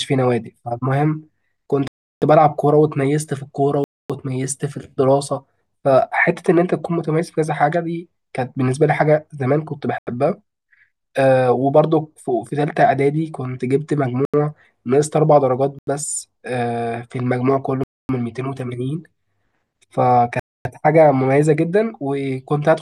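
Abrupt holes cut into the speech at 1.88 s (341 ms), 3.84 s (256 ms), 9.98, 14.25 and 15.79 s (85 ms each), then 17.84 and 20.40 s (256 ms each). These are blocks of digital silence, likely where output buffers went unfilled and dropped to silence.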